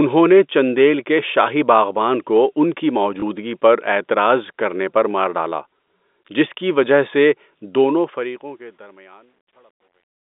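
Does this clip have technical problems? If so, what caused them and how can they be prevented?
Yes. At 3.2 s, just after "باغبان کو ان کی", one 20 ms packet was lost (packet loss with last packet repeated). The receiver filled the gap by replaying the previous packet. This single repeat sounds like a small blip in the speech. This can be prevented with forward error correction or with pitch-aligned packet loss concealment that blends and fades the fill.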